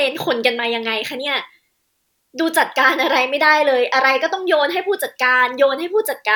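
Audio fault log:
No faults heard anywhere in this speech clip.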